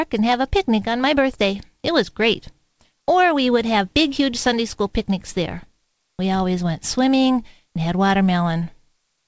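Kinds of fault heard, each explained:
Nothing stood out on listening to this speech, which carries nothing above 8 kHz, consistent with a wideband call codec such as G.722.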